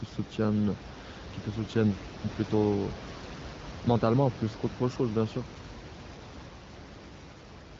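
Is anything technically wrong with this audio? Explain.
No, nothing stood out as technically wrong when listening to this speech clip.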